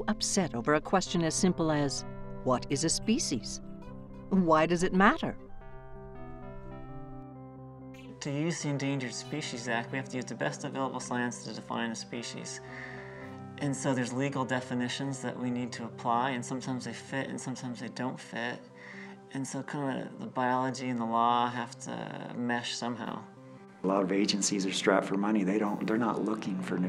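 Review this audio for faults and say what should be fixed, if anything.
No faults turn up in this audio, so nothing needs to be fixed.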